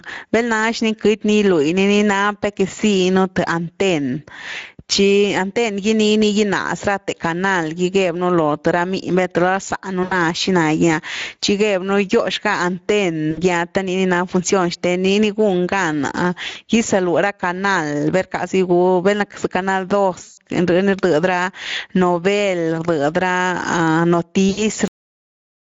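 Throughout the recording the level pumps up and down, moving by something like 15 dB. Loud and quiet passages sit unnaturally close together and the speech sounds squashed. This is gain pumping, likely from the input gain being set far too high and a fast limiter or compressor clamping down on each peak, then letting go in the gaps.

Over the whole clip the speech also has a noisy, hoarse grain, and the upper band sounds like hissy fill rather than real detail. That is the Speex codec. Its CELP coder has too few bits to rebuild the excitation accurately, so the texture of the voice degrades. The amount of damage fits a mid-quality setting around 16.8 kbps.

At 10.03–10.14 s, 13.31–13.43 s, 16.49–16.58 s, 20.23–20.37 s and 24.49–24.65 s the speech briefly smears into a buzzy tone or coloured noise that fades. The speech stays weak and warped for a moment after each one. These are VoIP packet losses concealed by the speech codec. 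When audio went missing, the decoder kept extending its last pitch and filter and turned the gain down frame by frame. The gaps are roughly 80, 60, 60, 140 and 80 ms long, and the 140 ms gap at 20.23 s sounds like about seven lost 20 ms frames. Because each decoded frame depends on the previous one, recovery lags behind the return of the packets.

At 24.88 s the audio stops in the middle of a sound and drops straight to digital silence with no decay, leaving nothing but dead air to the end. This is a cut-off end: the final buffers were never written or played out, so the recording breaks off abruptly instead of finishing.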